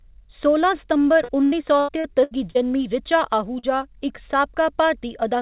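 From 1.24 to 2.58 s the speech turns choppy and robotic, right up to "जनमीं ऋचा". That's repeated packet loss. Six separate holes open up in that stretch, adding up to about 360 ms of missing audio. The longest runs to 82 ms. Each time, the receiver stretches out the last bit of sound to cover the hole, and roughly a quarter of the stretch ends up patched this way. The smeared, buzzy texture comes from those repeated fills.

Just after "जनमीं ऋचा", around 3.59 to 3.66 s, there's a single short concealed packet loss. About 40 ms never arrived, and the decoder filled it by carrying on the previous sound before blending back into the real signal. You hear it as a quick smear or wobble. Throughout, the audio stops at 4 kHz, which fits a narrowband call codec like G.711 mu-law.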